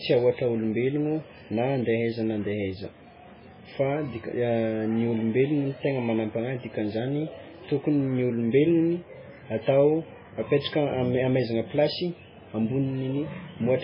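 From start to finish the speech carries heavy MP3 compression damage, likely from encoding at a very low bitrate, which fits something around 16 kbps. Nothing survives above 5.2 kHz, so sibilants lose their edge. Weak spectral detail flickers in and out between frames, giving a watery, swirling texture and metallic chirps on s sounds, with consonant attacks smeared. That frame-to-frame warble distinguishes it from a simple low-pass filter, which would dull the treble cleanly.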